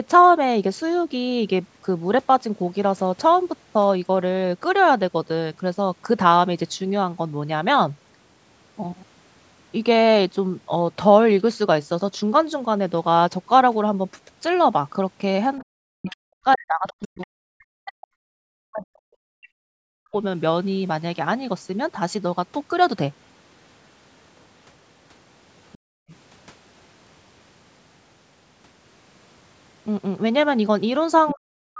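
Other side's voice leaking through appears in this speech clip at 15.58–15.63, 16.09–16.15, 16.87–17.27, 25.73–26.15 and 31.26–31.34 s. These scraps of a second voice sit roughly 25 to 30 dB under the talker, rising to about 10 dB under at the end, and are likely loudspeaker echo that the canceller left in the microphone signal. Speech suppressed in double talk runs from 15.63 to 20.14 s and from 31.32 s to the end, where the talker's voice dips by as much as roughly 40 dB. This is likely because the canceller could not tell the talker from the echo while both sides spoke. Background gated by the echo canceller occurs from 25.78 to 26.08 s, where the room sound drops by about 40 dB for 0.3 s while the loudspeaker plays and then returns. The call's microphone processing, with nothing above 8 kHz, is also present, which is normal.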